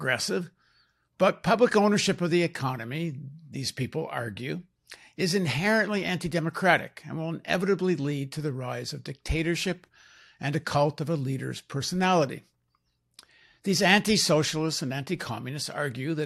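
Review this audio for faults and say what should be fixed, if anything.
Nothing stood out on listening to this speech recording, so there is nothing to fix.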